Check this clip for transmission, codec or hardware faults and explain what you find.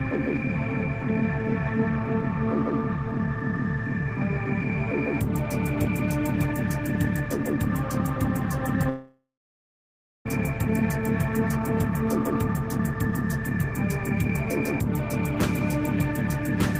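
There's one fault worth flagging: a long network dropout running from about 8.89 to 10.27 s. The audio doesn't cut cleanly. The last bit of sound gets stretched into a fading buzz or hiss, then there's close to a second of dead air, around 0.98 s. When things pick up again, roughly 1.36 s of material is simply gone. That's likely because packets stopped arriving and the receiver papered over the gap instead of recovering what was lost.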